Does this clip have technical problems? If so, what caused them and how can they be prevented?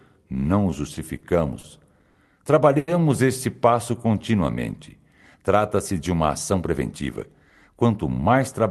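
Yes. There are five short stalls from late packets, at 0.95, 1.19, 1.60, 2.10 and 2.79 s, each holding the sound for 20, 30, 40, 50 and 90 ms. A packet arrived late, the jitter buffer ran empty, and the receiver stretched the last sound until it came, so nothing is lost. On a spectrogram each stall is a short frozen, horizontally smeared band. Larger jitter-buffer headroom or steadier network routing would prevent them.

A jitter buffer slow-down runs from 3.98 to 4.22 s, playing at 87% speed and adding 39 ms. The receiver repeated pitch periods to rebuild its reserve, so the sound drags at unchanged pitch. The waveform shows near-identical cycles in a row. A stable target delay would avoid it.

A jitter buffer speed-up follows from 6.29 to 7.23 s at 112% speed, cutting about 150 ms. The jitter buffer held more audio than it aims for, so the receiver removed short pitch periods to reduce the delay, and the sound is hurried at the same pitch. 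The waveform shows whole cycles cut out, with unchanged cycle spacing. Smoother packet delivery would prevent this.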